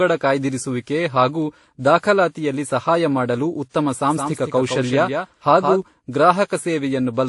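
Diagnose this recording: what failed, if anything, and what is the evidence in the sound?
Transcoding between lossy codecs runs through the whole clip. Nothing reaches above 11.3 kHz, and smeared, swirly artefacts of different characters sit on top of one another. This is likely a codec-stage fault: successive encoders each re-quantised the previous one's errors and kept the lowest cut-off.

A doubled audio track appears from 4.10 to 5.82 s, right after "ದಾಖಲಾತಿಯಲ್ಲಿ ಸಹಾಯ ಮಾಡಲು ಉತ್ತಮ". A dry, full-band copy trails the speech by roughly 150 ms, a few dB quieter, and starts and stops abruptly. This likely comes from a second, slower capture path being mixed in.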